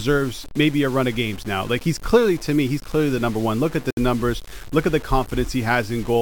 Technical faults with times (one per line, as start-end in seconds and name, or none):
0.00-6.22 low bit depth without dither
3.91-3.97 gap at a join of encoded pieces